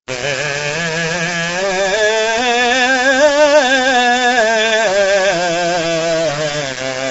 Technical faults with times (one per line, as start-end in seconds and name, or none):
0.00-7.10 low bit depth without dither
0.00-7.10 low-delay AAC compression